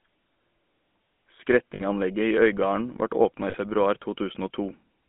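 Speech, coded throughout with the GSM full-rate codec. The voice has a buzzy, gravelly roughness that is plainly audible. The band runs from about 200 Hz to 3.5 kHz. The sound fits the 13 kbit/s GSM coder, which rebuilds speech from a vocal-tract model and a coarse pulse excitation. There are two bursts of lost GSM frames, at 1.74 to 1.83 s and at 3.50 to 3.55 s. Each gap is filled by repeating the last good frame. The result is a short, rough, metallic ring. The first gap lasts 60 ms, which fits three lost frames. The second lasts 40 ms, which fits two.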